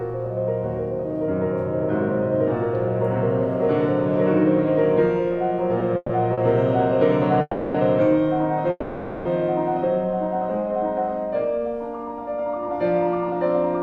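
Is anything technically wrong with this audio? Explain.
Yes. A call audio freeze occurs at 5.96–6.12 s, 7.41–7.77 s and 8.70–9.28 s. Each time, the last sound carries on as a fading buzz for about 130, 330 and 550 ms, briefly reaching silence. This is likely packets held up in transit, leaving the jitter buffer empty. Playback then resumes where it stopped.

A short stall from a late packet at 6.33–6.40 s holds a sound about 40 ms too long with a slight buzz. It is shorter than the freezes and does not fade toward silence, because the buffer waited only for one late packet.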